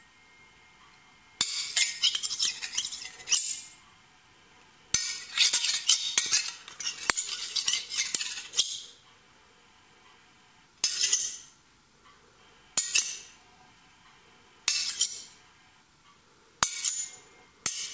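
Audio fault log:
Nothing to log here; these sounds come through a call path with a G.722 codec, which is why there's nothing above 8 kHz.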